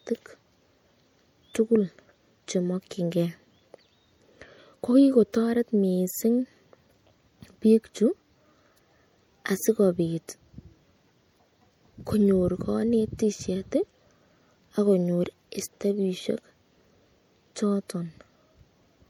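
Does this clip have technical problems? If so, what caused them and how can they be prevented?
Yes. The speech sounds watery and dull throughout, likely from MP3 compression at a rate near 64 kbps, which starves high frequencies of bits. Encode at a higher bitrate or keep a lossless copy.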